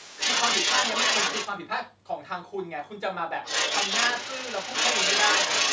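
Speech with the other side's voice leaking through from 0 to 1.48 s and 3.44 to 5.73 s, a second, somewhat louder voice, likely from incomplete echo cancellation, showing as overlapping harmonic stacks on a spectrogram that stays empty above 8 kHz.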